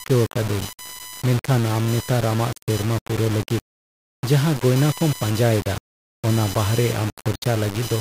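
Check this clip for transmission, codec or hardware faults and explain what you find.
Two hardware-related faults run through the whole speech clip.

Computer activity noise is present throughout. Load changes in the computer disturb the audio circuit's shared ground, producing a buzzing chirp pulsing around 1 kHz, roughly 20 dB below the speech.

Grainy distortion that follows the speech is also present throughout, sitting around 15 dB below it. The likely cause is low bit depth without dither, with rounding to about 4 bits, which makes quiet passages gritty and sputtery.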